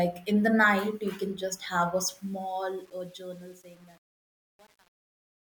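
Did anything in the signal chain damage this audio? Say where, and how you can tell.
Yes. Truncation distortion on the fade out, from 2.17 s after "can just have a". A gain stage without dither, fitting 8 bits, turns gritty from 2.44 s.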